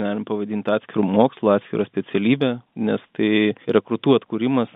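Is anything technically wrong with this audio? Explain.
No, nothing is technically wrong.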